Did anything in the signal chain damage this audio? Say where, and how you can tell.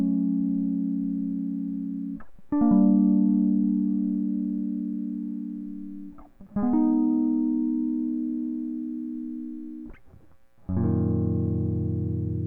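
No, nothing in the chain has left an audible mark on this music, and there's nothing here to point at.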